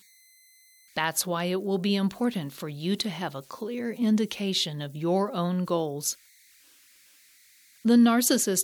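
A delta-sigma converter running without dither has slipped into repeating bit patterns on this speech recording, producing converter idle tones throughout: a faint whistle somewhere around 2 kHz sits about 34 dB below the signal, exposed in pauses and roughening quieter passages with grainy noise.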